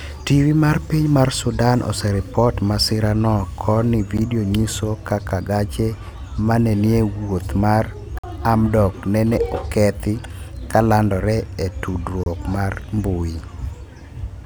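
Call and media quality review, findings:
Gap between stream segments: timestamps on 4-second segment boundaries don't meet, so the player pads the hole with silence. Hard-edged dropouts in the speech at 4.17 s (about 11 ms, after "oseripot masira no koni"), 8.19 to 8.24 s (about 50 ms, before "hamdok nene okethi kalandore") and 12.24 to 12.26 s (about 27 ms, before "mar mbui"). Nothing is cut; the timeline is stretched by each gap.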